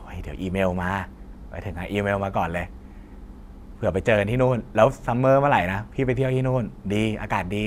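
No technical faults can be heard anywhere in this recording of speech.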